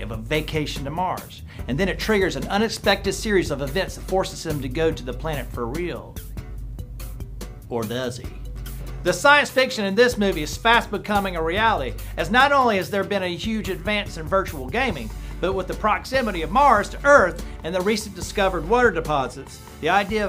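No technical faults can be heard anywhere in the audio.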